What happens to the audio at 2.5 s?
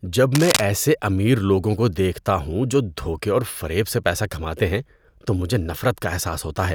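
Nothing goes wrong at 2.5 s: the speech runs straight through that moment with no dropout, click or other technical fault.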